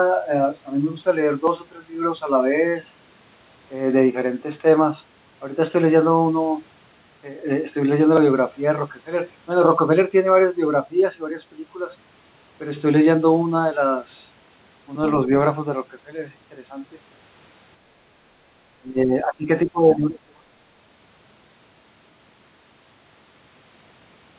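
Speech suppressed in double talk occurs from 18.77 to 19.49 s and again from 19.65 to 20.59 s, each lasting under a second. In both, the voice sinks sharply, by roughly 20 dB in the first and 25 dB in the second, then recovers. The likely cause is the echo canceller failing to separate the near talker from overlapping far-end echo and attenuating both. All of this sits within a band that stops at 4 kHz, consistent with a G.711-style call codec.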